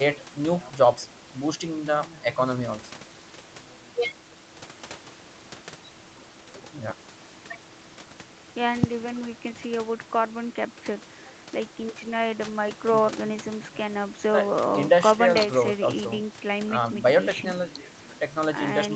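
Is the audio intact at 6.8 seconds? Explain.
Yes, the speech is intact at 6.8 seconds, with no fault at that moment.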